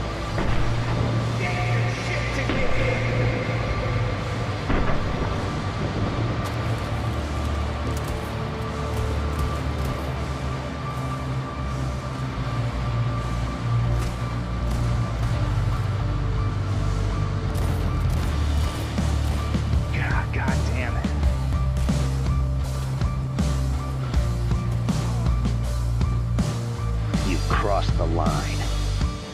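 Two kinds of fault affect the audio. A corrupt FLAC frame produces an error from 12.43 to 12.58 s, peaking at about -21 dBFS, and another at 18.22 s, peaking at about -24 dBFS. In both cases the decoder's prediction ran on damaged values until intact frames resumed, which fits damage spanning two frames. Compressed frames skipped makes the audio jump ahead by about a tenth of a second at 15.58–15.77 s and at 21.53–21.62 s. Missing or rejected frames cause the jumps, and because the lossless frames do not overlap, each join is a hard click. On a waveform each join looks like a sharp discontinuity, and on a spectrogram the content shifts abruptly at a thin vertical line.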